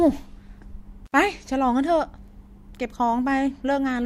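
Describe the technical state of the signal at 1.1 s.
At 1.1 s the speech drops out abruptly, with crackle at the break and a thin hiss filling the 62 ms gap, between 1.06 and 1.14 s. This is an intermittent contact: a loose plug or cable briefly opening the signal path.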